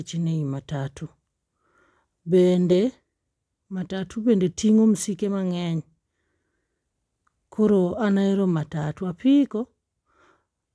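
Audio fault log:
No faults detected in the speech; nothing to log.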